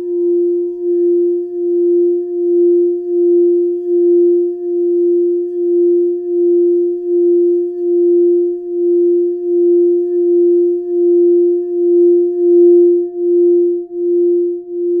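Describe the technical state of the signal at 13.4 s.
The signal is intact at 13.4 s, with no audible fault at that moment.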